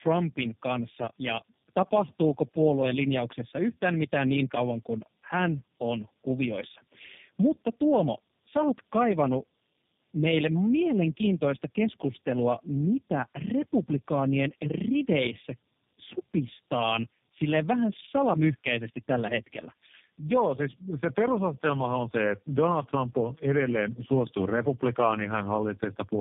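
From start to finish the speech carries tandem speech coding. It sounds like it went through two low-rate speech coders in a row, likely a narrowband AMR-type link feeding into G.729A. The second coder only had the first one's already mangled output to work with, so the errors stack up: the voice comes out rough, muffled and a bit warbly, with nothing above about 3.7 kHz.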